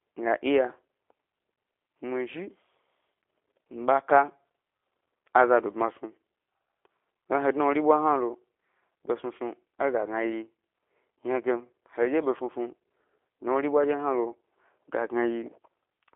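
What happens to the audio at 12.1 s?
At 12.1 s the speech carries the same G.729 codec damage present throughout the clip. The sound is rebuilt from a vocal tract filter, pitch predictor and sparse pulses, which fits an 8 kbit/s codec, giving a slightly rough, synthetic quality, with nothing above 3.6 kHz.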